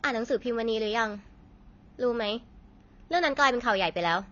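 From start to finish the speech carries AAC compression damage, likely from a low-bitrate AAC-LC encode near 24 kbps. Nothing survives above about 6.9 kHz, and sibilants turn fizzy and warbling. A plain low-pass filter would only dull the sound without that swirling texture.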